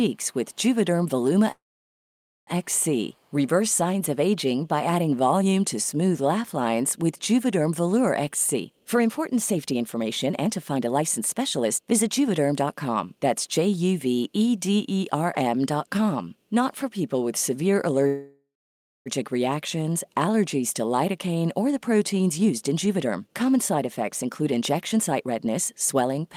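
Speech that stalls twice in what sounds like a call audio freeze, most likely from packets held up in transit until the jitter buffer ran empty. From 1.51 to 2.50 s the last sound is stretched into a brief fading buzz and then about 0.87 s of near-silence. From 18.07 to 19.09 s the same happens with about 0.55 s of silence. Each time the speech picks up exactly where it stopped, with nothing skipped, so a gap of roughly one second has been inserted rather than audio lost. That separates it from a dropout, which cuts material out. At 3.13 to 3.33 s a brief echo leak appears: a very faint copy of the speech returns 346 ms late, probably from a far-end loudspeaker whose echo canceller let a scrap through. Its distinct, fixed delay sets it apart from room reverberation, which trails off smoothly rather than repeating. From 8.54 to 13.89 s and again from 22.39 to 26.30 s the speech hurries along at 118% speed while its pitch stays the same. 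This is a jitter buffer speed-up, in which the receiver trims many tiny pitch-period slices to shed built-up delay, about a second in the first stretch and roughly 0.7 s in the second. Unchanged pitch is what distinguishes it from a sample-rate mismatch, which would raise the pitch along with the speed.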